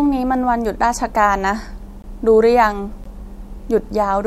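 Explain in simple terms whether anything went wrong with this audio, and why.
Yes. The speech drops out twice, briefly, from 2.02 to 2.04 s and again at 3.04 s. This is a gap between stream segments: the 1-second chunks were stitched with timing that didn't line up, so the player inserted about 18 ms and 16 ms of silence. Nothing was lost.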